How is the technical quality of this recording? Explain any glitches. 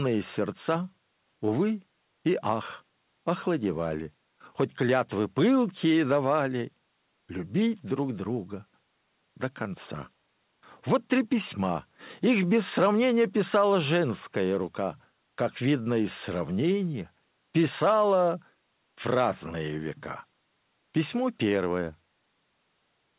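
No glitches; it sounds like a narrowband phone call.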